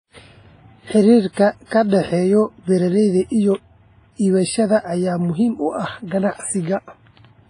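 A speech clip that has likely passed through heavy WMA compression, at a low bitrate that fits around 24 kbps. The transform codec zeroes weak spectral lines and removes everything above 10.1 kHz, so the voice sounds dull, ringing and washy, with hiss that rises and falls with the signal. Pre-echo appears where sharp attacks fall late in the codec's long blocks and quantisation noise fills the quiet gap before each one. A short hiss runs from 1.33 to 1.37 s (41 ms) and from 1.65 to 1.71 s (58 ms), just before "ka dhexeeya beeralayda iyo", and blurs those onsets.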